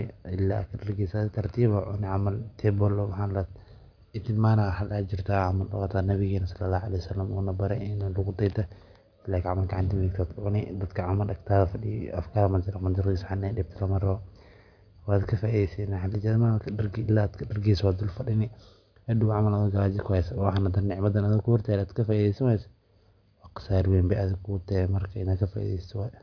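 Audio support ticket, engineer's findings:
No faults found in clip.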